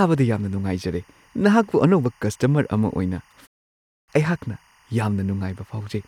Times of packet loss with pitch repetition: none

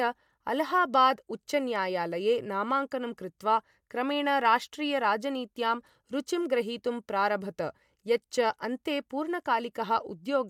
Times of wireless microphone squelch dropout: none

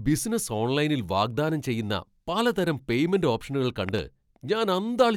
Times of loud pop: 3.89-4.00

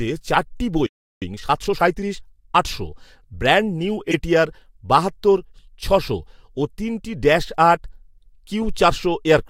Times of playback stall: 0.86-1.22

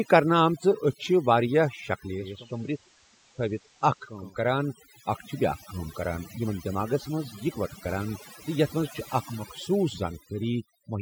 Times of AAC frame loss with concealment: none

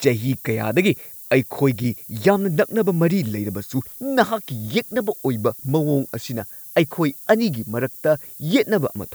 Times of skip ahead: none

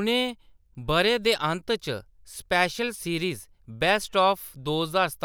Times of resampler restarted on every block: 0.00-1.50

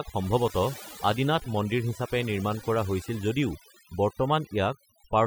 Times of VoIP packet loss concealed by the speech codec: none

